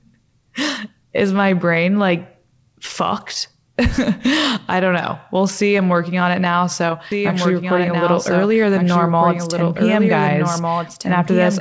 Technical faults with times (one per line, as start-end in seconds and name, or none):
7.12-11.61 doubled audio track